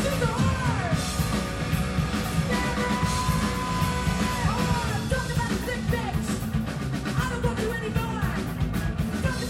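No technical fault can be heard anywhere in the recording, with the signal level, continuity and timing holding steady throughout.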